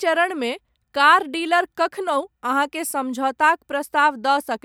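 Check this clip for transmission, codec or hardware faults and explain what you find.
No technical fault can be heard anywhere in this speech recording, and the signal holds steady throughout.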